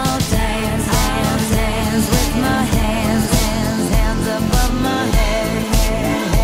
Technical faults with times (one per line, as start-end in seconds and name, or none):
0.00-3.56 doubled audio track